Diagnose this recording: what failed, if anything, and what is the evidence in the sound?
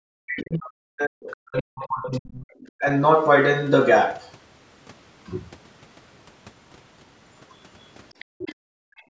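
In the call-processing stage, speech is pulled down between 0.13 and 2.86 s, at its deepest by something like 40 dB, over roughly three seconds in total. This is speech suppressed in double talk: the echo canceller likely detected both ends talking and attenuated the near talker along with the echo.

Also in call processing, the other side's voice is leaking through: a second, faint voice appears at 1.31 to 1.37 s, 8.1 to 8.54 s and 8.97 to 9.02 s, well below the main talker. The canceller likely did not fully subtract the far-end signal the microphone picked up from the loudspeaker.

The background is gated by the echo canceller at 8.25 to 8.39 s and again from 8.55 s to the end. The room tone falls by about 40 dB, returning after the first drop. Overlapping the leaked far-end audio, the canceller clamped the microphone hard while the loudspeaker was active.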